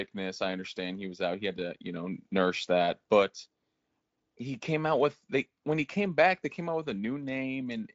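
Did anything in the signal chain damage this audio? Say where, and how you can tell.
No, nothing in the chain damaged this speech.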